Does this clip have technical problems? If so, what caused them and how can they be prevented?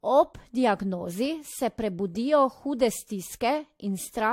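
Yes. The speech was likely decoded and re-encoded with a lossy codec about three times, each pass quantising on a shifted frame grid so the errors pile up. Throughout the clip this generation loss sounds swirly, hollow and smeared, and consonant attacks blur. Nothing remains above 16.6 kHz, which fits AAC-LC at around 64 kbit/s. To prevent it, keep a lossless master and encode to a lossy format only once, at the final step.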